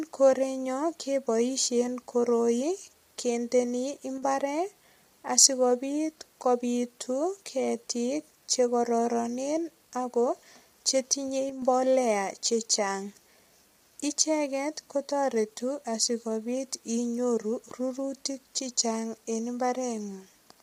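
Throughout the speech, the audio sounds rough and grainy, with noise between the pitch harmonics and a thin, synthetic top band. Heavy low-delay AAC compression is the likely cause: its short frames resolve harmonics poorly, and the damage fits a bitrate around 24 kbps.

At 4.18 to 4.23 s and again at 11.50 to 11.62 s, the level drops abruptly by about 6 dB and then recovers. One channel dropping out is the likely cause: the mono sum loses half its shared signal for those 50 ms and 128 ms spans.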